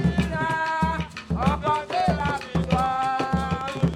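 A train of clicks runs from 1.68 s to 3.95 s, most likely from interference by nearby equipment or a faulty connection or power supply, injecting a short pulse again and again. The pulses arrive at about 8.4 per second, spaced unevenly, roughly twenty in all, each much the same shape and peaking around 10 dB above the sound. They come through as an irregular ticking, popping layer on top of the audio.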